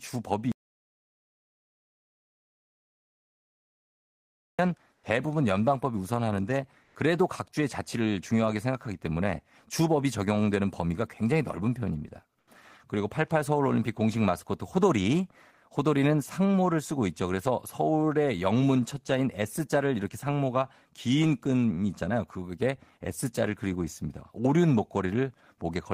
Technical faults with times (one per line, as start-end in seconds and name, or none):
0.52-4.59 audio dropout to silence
4.93-5.03 comfort noise in place of the background
6.83-6.95 comfort noise in place of the background
12.39-12.47 comfort noise in place of the background